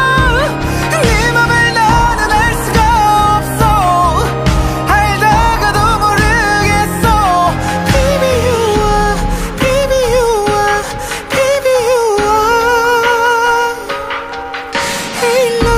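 Nothing technical stands out in this audio, so there's honestly no fault to point to anywhere in it.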